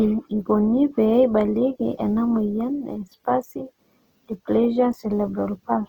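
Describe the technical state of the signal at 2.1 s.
At 2.1 s the speech sounds rough and grainy, as it does throughout, likely Opus compression at a low rate around 16 kbps, with band-filling noise standing in for detail.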